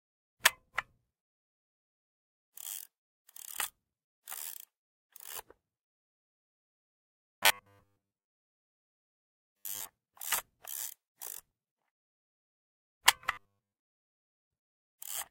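From 7.18 to 9.89 s, and again from 13.32 to 13.73 s, the everyday sounds take on a robotic sound from repeated short buffers: a rigid, metallic 100 Hz buzz. The likely cause is audio arriving too late, so a 10 ms fragment is looped in place of most of the real signal.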